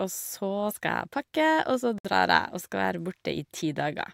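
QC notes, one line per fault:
1.98–2.05 s, gap at a join of encoded pieces: the speech drops out in a 62.5 ms gap, with smeared edges, then resumes exactly where it stopped. Pieces 2 s long were encoded separately and joined untrimmed, leaving each encoder's start delay and last-frame padding in place.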